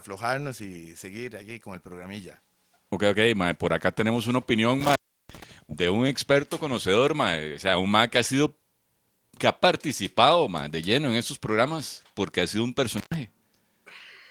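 Speech that drops out twice, each time with a crackle at the edges: from 4.80 to 5.44 s after "acá tenemos una opinión", silent for about 340 ms before "de un experto conocedor", and again from 12.98 to 13.14 s after "porque ha sido un", silent for about 116 ms. This is intermittent contact, a loose cable or plug briefly breaking the signal path.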